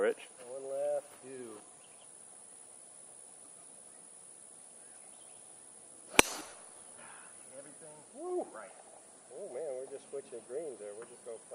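Lost LE Audio frames at 6.40 to 6.54 s: across about 140 ms, roughly 60 ms of the Bluetooth LE Audio stream never arrived, in short scattered gaps that fit six 10 ms frames, with the longest run around 30 ms. For each gap, the LC3 decoder filled in by repeating the last good spectrum with randomised signs. The sound there turns briefly into a grainy, noisy smear that flickers rather than dropping out. The runs are too short to reach the fade toward silence. Outside this stretch, the light codec compression remains faint.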